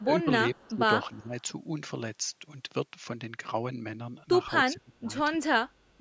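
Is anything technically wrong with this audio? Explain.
Yes, there are two problems in this speech: repeated dips from double-talk suppression and one brief echo leak.

Speech suppressed in double talk, at 0.02 to 0.28 s, 0.68 to 0.83 s, 1.05 to 1.34 s and 4.65 to 5.1 s, is likely caused by an echo canceller that could not separate this talker from the far side's loudspeaker echo and turned everything down. The voice drops by about 15 dB in the first two events, about 10 dB in the third and about 20 dB in the last. The last gap is the longest, close to half a second.

An echo leak appears at 0.55 to 0.76 s. It was likely caused by one side playing the call on a loudspeaker whose echo canceller let some of its microphone pickup return. A faint copy of the voice comes back 304 ms late, sitting about 35 dB below the main speech, and is heard as a short, quiet scrap.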